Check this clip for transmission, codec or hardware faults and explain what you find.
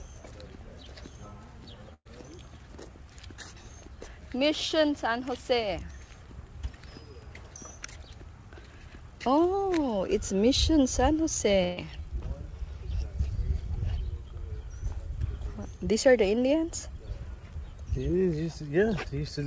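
Two short dropouts here, both a burst of packet loss. From 1.94 to 2.07 s, about 120 ms went missing. The receiver stretched the last sound into a decaying fill, then briefly went silent. From 11.63 to 11.79 s, roughly 140 ms was lost and concealed with the same decaying fill, but without the silence. After each gap the audio jumps ahead. The band stops at 8 kHz, which fits a wideband call codec such as G.722.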